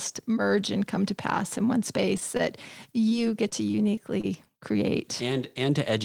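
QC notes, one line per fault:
2.37–2.41 s, short stall from a late packet: a packet turned up late, the jitter buffer ran dry, and the receiver held the last bit of sound for about 20 ms until it arrived. Nothing's actually lost; playback just picks up where it left off, about 20 ms later than before. What you hear is a tiny drawn-out moment with a faint buzzy or dipping quality where the sound was stretched.
3.09–3.13 s, short concealed packet loss: here about 20 ms of speech never made it to the decoder, and the receiver papered over it with roughly 18 ms of synthesized continuation before blending back into the real signal. Because the gap is patched by extending whatever came just before, you get a brief smear or wobble instead of a clean dropout, and a quick consonant in that spot can just disappear.
3.49–4.26 s, repeated packet loss (robotic sound): across this stretch, four separate holes land close together, the longest about 28 ms, with around 60 ms of speech missing in total and about 87 ms of fill, roughly 11% of the span. 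Each hole gets patched by continuing the previous sound, and the next one arrives before things settle, so this section comes across choppy, with bits of speech dropped out.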